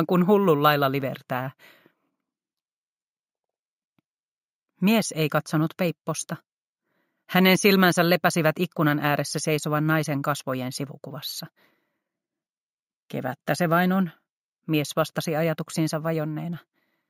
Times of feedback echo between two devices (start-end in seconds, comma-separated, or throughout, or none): none